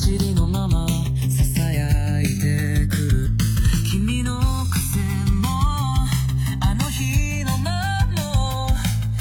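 From the start and throughout, the two channels are drifting apart. They appear to be clocked independently, with a rate mismatch somewhere around 150 parts per million, so the offset between left and right grows steadily, reaching roughly a millisecond and a half by the end. When the channels combine, the resulting comb-filter notches move gradually across the spectrum, giving the sound a slow, sweeping flange that shifts in character as the offset widens.

At 3.22 to 3.26 s there is damaged data in the compressed stream. For about 40 ms the decoder is handed bytes it cannot interpret correctly. It misreads the affected frames, loses synchronisation and has to hunt for the next valid frame header before normal decoding resumes. The result is a brief squawk or chirp.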